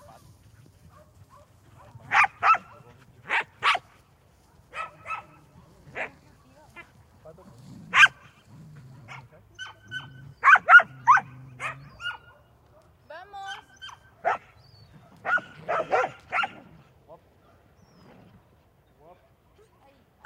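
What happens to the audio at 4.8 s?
Nothing goes wrong at 4.8 s; the audio plays through that moment intact, with no dropout, glitch or distortion.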